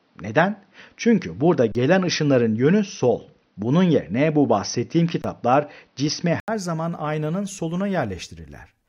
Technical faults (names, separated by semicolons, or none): input switched to a poorer device; underrun with held sample